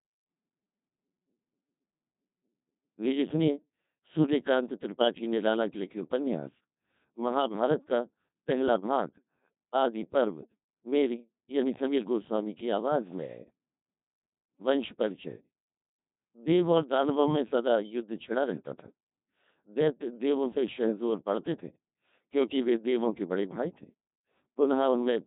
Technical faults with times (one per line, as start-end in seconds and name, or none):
0.00-25.26 Codec 2 vocoder